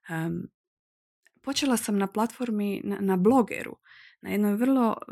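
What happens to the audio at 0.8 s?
Nothing goes wrong at 0.8 s: the speech runs on intact there, with no dropout, click, glitch or other fault.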